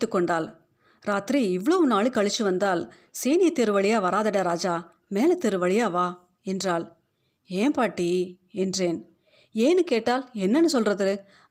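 A speech recording with no technical fault audible anywhere. There is nothing to point to at any time in it.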